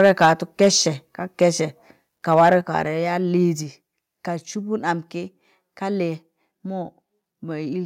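A speech recording with microphone overload in its first couple of seconds: from 0.0 to 0.29 s, 0.61 to 0.68 s, around 1.42 s, and 2.32 to 2.53 s the loudest syllables take on a harsh, crackly edge, with peaks running up to about 6 dB past full scale and a few percent of samples flattened. The likely cause is the mic input sitting too hot, so the converter chops off the waveform tops. You'll also hear the microphone volume stepped down three times, at 0.25 s, 2.61 s and 3.63 s, dropping the voice and background by about 2, 6 and 2 dB. That's most likely the call software spotting the clipping and pulling the device's input level down in single jumps.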